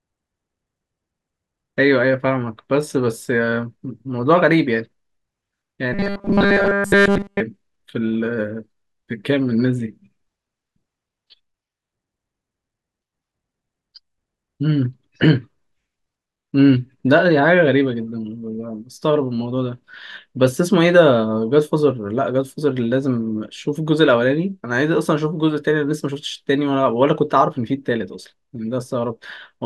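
From 5.93 to 7.41 s, new audio likely arrived too seldom, so the same short buffer was replayed throughout, creating a robotic sound from repeated short buffers: a rigid, metallic 200 Hz buzz that fits a 5 ms loop.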